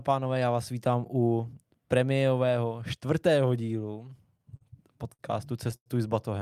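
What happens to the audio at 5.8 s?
A packet arrived late at about 5.76 s, and the receiver's jitter buffer ran dry, causing a short stall from a late packet that lasts until about 5.88 s. Rather than leave a gap, the receiver kept extending the last bit of sound for roughly 0.1 s until the packet turned up, then resumed exactly where it had stopped. Nothing is lost, but the speech hangs on one sound a moment too long, with a faint buzzy, slightly dipped quality, and everything afterwards runs about 0.1 s later.

Underneath this, the converter's sampling clock wanders by a fraction of a microsecond, so each sample is taken a touch early or late. This sample clock jitter turns the waveform's steepness into error, leaving a fine hiss or roughness roughly 55 dB below the speech. It is thickest on loud, bright sounds and falls away entirely in quiet moments.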